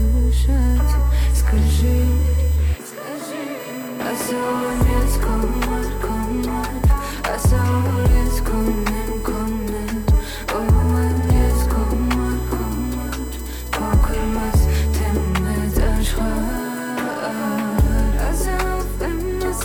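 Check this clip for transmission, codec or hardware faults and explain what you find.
There is one hardware fault, USB whine, present for the whole clip. The USB bus pulls current in regular bursts, 1 ms frames and 125 microsecond microframes, and that ripple is leaking into the audio path through the shared power or ground. The result is a steady, fixed-pitch whine with a component at 1 kHz and its strongest energy at 8 kHz, sitting roughly 25 dB below the sound and heard beneath it throughout.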